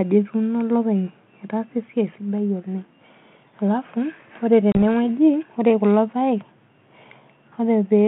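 At 4.72 s the speech drops into a hard-edged hole of about 30 ms, ending by 4.76 s. It comes back slightly distorted before settling over the next few tens of milliseconds. This is packet loss on an ADPCM call: a few packets went missing and were filled with silence. The G.726 decoder, running at 32 kbit/s, lost track of the sender's adaptive predictor and step size until they realigned.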